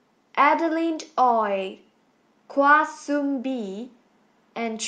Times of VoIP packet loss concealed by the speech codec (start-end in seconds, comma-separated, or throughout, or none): none